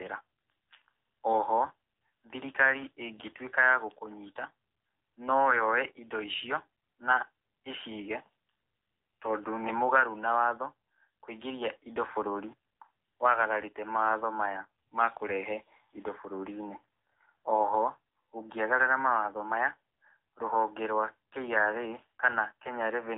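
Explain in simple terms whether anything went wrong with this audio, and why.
AMR narrowband mobile codec damage runs through the whole recording, from start to finish. This is the speech codec used on older mobile phone calls. It throws away everything above about 3.8 kHz, so the voice sounds thin and muffled, like a phone line. It rebuilds speech from a rough model of the throat and mouth, using very little data. Here that shortcut is plainly audible, giving the voice a buzzy, artificial edge.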